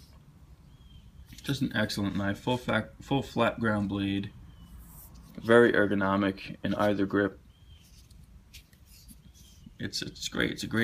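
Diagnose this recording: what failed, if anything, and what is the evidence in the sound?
Nothing in this recording points to a failure at any stage of the chain. No dropout, discontinuity or other break in the signal gives a reason to suspect the wiring, conversion, buffering, transport or playback.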